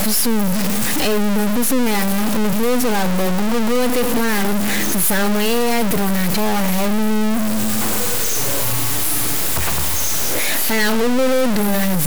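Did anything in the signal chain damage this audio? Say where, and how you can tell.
Yes, likely a stuck bit at the converter. One bit is pinned, so the speech buzzes harshly throughout and the pauses fill with noise at about -15 dBFS.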